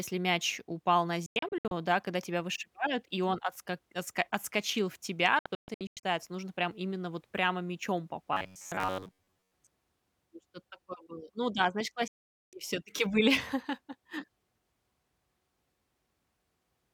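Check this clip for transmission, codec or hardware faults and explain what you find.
Three digital broadcast dropouts and one stretch of robotic sound from repeated short buffers are audible in this speech clip.

The digital broadcast dropouts occur at 1.26–1.72 s (after "мяч упал на", before "да когда тебя вышибают"), 5.39–6.04 s and 12.08–12.53 s (after "да значит"). The receiver mutes whenever frames fail, with 3 ms fades. The first two dropouts are scattered holes with runs up to 96 ms and 128 ms, and the third is one continuous 448 ms silence.

The robotic sound occurs at 8.33–9.52 s, after "именно вот прямо мячом". It is a rigid, metallic buzz at 93.8 Hz that loosely tracks the speech. It is likely caused by a roughly 10.7 ms buffer being replayed while around 70% of the real audio is skipped.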